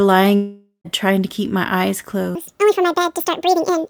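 From 0.35 to 0.87 s the speech breaks off in what is likely a long network dropout: about half a second of audio never arrives, the last sound is smeared into a fading buzz, and roughly the final 0.11 s is plain silence before the speech resumes with that stretch gone.

From 2.35 s to the end, the section plays at the wrong speed, 1.86 times too fast, likely from being clocked against the wrong rate. Pitch rises with tempo, about ten semitones, so the voice turns high, squeaky and hurried.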